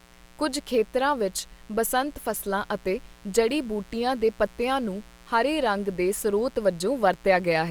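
A steady, raspy buzz sits under the speech from start to finish, well below it: mains buzz, with switching spikes carrying 60 Hz harmonics up into the kilohertz range.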